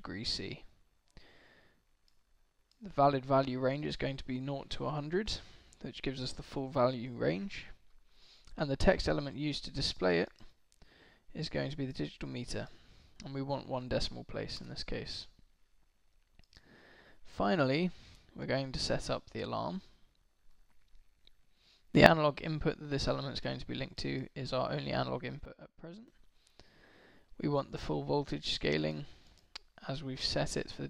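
At 21.94 s the level leaps up by about 14 dB and drops back at 22.06 s. At 25.45 s it falls by about 12 dB until 26.08 s. Both are sudden gain jumps, most likely a gain change applied between single samples with no ramp. The background noise steps up and down with the sound, and each change is instant rather than a smooth swell or fade, which rules out a compressor or a fader move.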